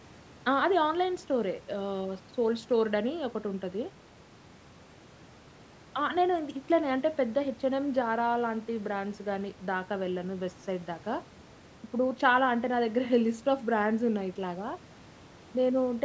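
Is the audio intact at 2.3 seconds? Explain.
Yes, the speech at 2.3 seconds is intact, with only the call's microphone processing on it, which trims the lowest bass as it normally does.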